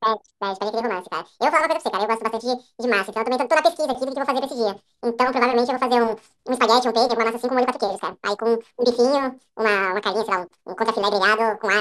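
Throughout, the speech runs twice as fast and a full octave (12 semitones) high. This is a wrong sample rate, which fits 24 kHz audio played at 48 kHz unconverted. Pitch and tempo rise together by 2.0, unlike a pitch shift or time-stretch, which alter only one.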